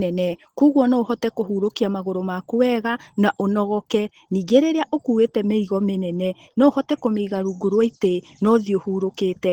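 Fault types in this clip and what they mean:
Opus voice compression: The whole clip carries that plainly audible low-rate Opus character. The speech sounds coarse and a bit hoarse, with a faintly robotic edge from the roughly coded excitation, coded in 20 ms frames. It sounds like hybrid operation, a linear-prediction core for the lower band with a transform layer on top, still reaching to about 20.4 kHz, at a rate that fits something around 16 kbps.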